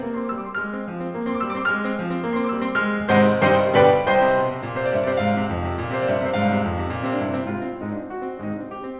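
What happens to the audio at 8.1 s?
At 8.1 s the music carries on intact, passing through the call path as elsewhere, with nothing above 4 kHz, and nothing breaks, drops or distorts at that point.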